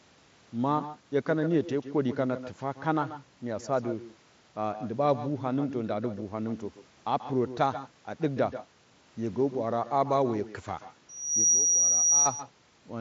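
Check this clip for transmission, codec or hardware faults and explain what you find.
Two faults: an uncancelled echo runs through the whole recording, and a feedback squeal breaks out near the end.

Echo with no canceller: the far end is playing the call over a loudspeaker, its microphone picks that playback up, and no echo canceller strips it out before it is sent back. Every phrase of the speech returns roughly 150 ms later, about 15 dB quieter, as a thin shadow trailing the original throughout the clip.

Loudspeaker feedback squeal: from 11.09 s to 12.32 s, a microphone hears the loudspeaker it is driving, and around 5.8 kHz the loop gain climbs above one. That single frequency reinforces itself on every pass and swells in under half a second into a piercing whistle that ends up a few decibels louder than the speech. It sits well inside the audio band, which stops just short of 7.7 kHz, consistent with a Bluetooth mSBC headset link.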